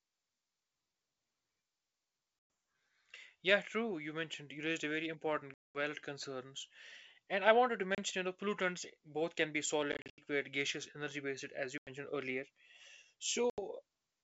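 Speech over a G.722 wideband call with packet loss on an ADPCM call: hard silent holes at 2.39–2.50, 5.54–5.76, 7.95–7.99 s (after "and I wanted to"), 9.92–10.19 s (scattered gaps after "pollutants both can be"), 11.78–11.89 s (after "as you") and 13.50–13.59 s. Unlike a plain dropout, each return is slightly distorted while the decoder's predictor resynchronises.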